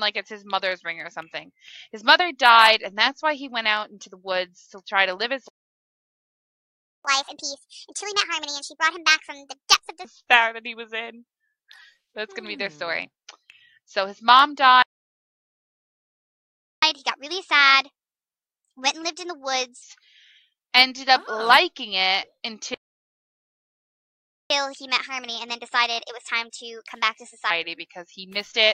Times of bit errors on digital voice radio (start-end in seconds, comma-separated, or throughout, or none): none